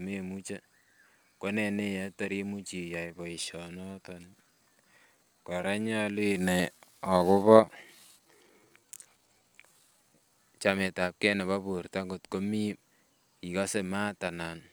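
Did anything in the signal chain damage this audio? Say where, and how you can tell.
Yes. From 2.95 s to 10.33 s the speech slows to about 0.74 times its normal pace while its pitch stays put. That points to a time-stretched section, likely from software in the editing or playback stage lengthening the passage by repeating short overlapping grains. On a spectrogram, harmonics keep their spacing but onsets stretch and blur, and the waveform shows repeated grain-like cycles with softened transients across that span.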